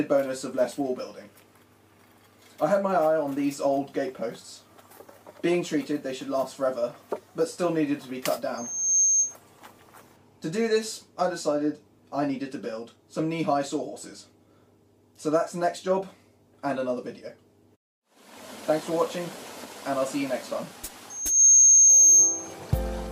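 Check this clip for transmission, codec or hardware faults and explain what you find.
There's one problem, and it happens twice: loudspeaker feedback squeal. From 8.57 to 9.35 s and again from 21.10 to 22.54 s, a pure 6.4 kHz tone swells up over about half a second. The first time it sits a little above the audio. The second time it's much louder and more piercing. The microphone is picking up its own loudspeaker, and at 6.4 kHz the loop gain goes over unity, so that frequency keeps feeding on itself until the amplifier limits it or the loop is broken.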